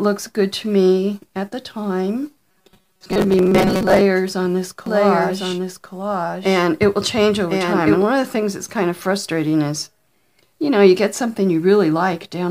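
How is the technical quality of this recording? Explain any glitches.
The recording has two glitches.

Robotic sound from repeated short buffers, 2.50 to 4.01 s: the likely cause is audio arriving too rarely, so tiny chunks of about 5.3 ms were replayed in place of roughly half the real signal. That repetition stamps a fixed 188 Hz buzz over the sound, giving it a rigid, metallic tone.

Doubled audio track, 4.86 to 8.02 s: a second full-band copy of the sound runs about a second behind, roughly 5 dB quieter, likely from a slower duplicate capture path. It has no decay or room colour, and it cuts in and out abruptly.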